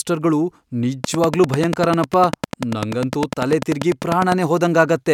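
From 1.04 s to 4.33 s, a train of clicks runs over the speech. The pulses arrive at a steady 10.1 per second, about thirty in all, and each has much the same sharp shape. They peak at around 15 dB above the speech, so they stand out clearly. The effect is an even ticking that carries on through the pauses as well. The likely cause is electrical interference from nearby equipment or a faulty connection or power supply.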